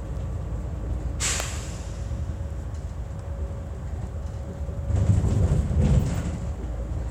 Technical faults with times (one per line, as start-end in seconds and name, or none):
1.40 electrical switching spike